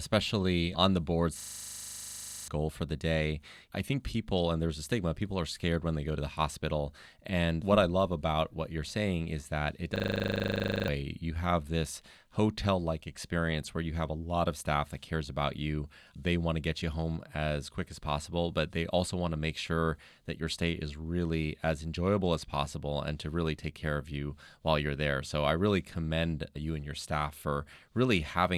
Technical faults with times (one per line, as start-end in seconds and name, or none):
1.40-2.48 system hang loop
9.96-10.88 system hang loop